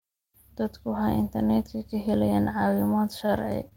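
Speech with two short stalls from late packets and one short concealed packet loss. The stalls fall at 1.78 to 1.82 s and 3.26 to 3.30 s. In each, a packet was late, the jitter buffer ran dry, and the receiver stretched the last sound, for about 18 ms and then about 24 ms, before picking up exactly where it stopped. Nothing is lost. A sound is simply held a touch too long with a faint buzz or dip, and everything after it arrives slightly later than it should. The concealed packet loss at 3.68 to 3.73 s is different. About 20 ms of real audio never arrived, and the decoder covered the gap with roughly 22 ms of synthesised continuation before blending back in. The telling contrast is that here something is actually missing. Instead of a held sound that resumes intact, you hear a brief smear or wobble where the original detail should be, and a short consonant can drop out entirely.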